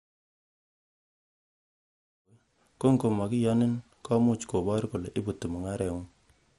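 Throughout the speech, the audio was likely squeezed through MP2 compression at a low rate, around 64 kbps. Starved sub-bands drop in and out and the rest are coarsely quantised, so the sound is dull and gurgly, with nothing above 15.8 kHz, even through the smooth fade-in from about 2 s to 2.8 s.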